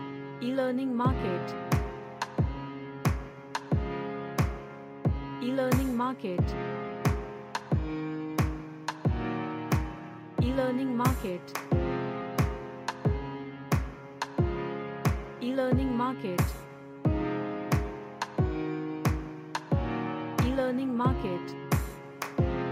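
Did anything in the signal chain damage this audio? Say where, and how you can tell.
No, nothing in the signal chain audibly damaged this audio.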